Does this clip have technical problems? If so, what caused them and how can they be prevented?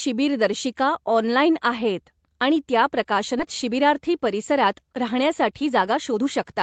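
Yes. At 3.39 to 3.41 s there is a skip ahead: the speech jumps forward with no gap or fill, and about a second of speech is simply missing. The audio on either side is butted together, so the speech lurches forward. This happens when the jitter buffer overflows and discards queued audio, or when that stretch is lost in transit. Unlike a dropout, there is no silence or concealment noise, only a discontinuity. Sizing the jitter buffer generously and avoiding bursty network delivery would prevent it.

From 3.64 to 6.54 s there is a jitter buffer speed-up. The speech runs at about 110% of normal speed while the pitch stays unchanged, and around a third of a second is trimmed in total. After delayed packets arrive in a clump, the buffer holds more than its target, so the receiver repeatedly cuts out tiny pitch-period-sized slices to catch up. A resampling error would shift the pitch, but here only the pace rushes. 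A steadier network path, or a gentler catch-up rate, would prevent this.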